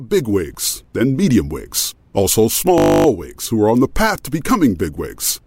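From 2.78 to 3.06 s, right after "then medium wigs also", the speech gives way to a system hang loop. The playback side stalled while the audio hardware kept replaying the same 20 ms ring-buffer segment, 14 times over. Because the loop is so short, the repetition rate of 50 Hz is heard as a steady, flat buzz rather than a stutter. Speech picks up again at "wigs who are on" with essentially nothing missing.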